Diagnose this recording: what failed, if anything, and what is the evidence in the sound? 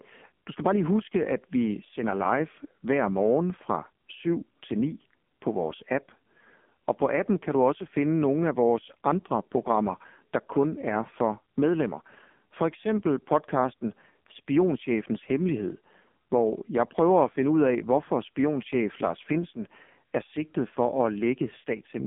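The codec stage is at fault: AMR narrowband mobile codec damage runs the whole way through. Nothing gets past about 3.6 kHz, the band sits between roughly 200 Hz and 3.5 kHz, and the speech comes out heavily buzzy and synthetic, which fits a low mode around 6 kbps.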